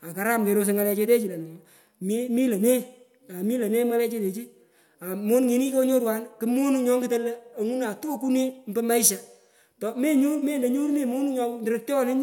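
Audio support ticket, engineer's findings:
No audible technical faults on the speech signal; no symptom found to trace to a component.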